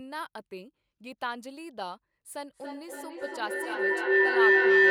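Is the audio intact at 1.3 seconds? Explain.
Yes, the speech at 1.3 seconds plays through intact, with no dropout, click, distortion or other fault at that moment.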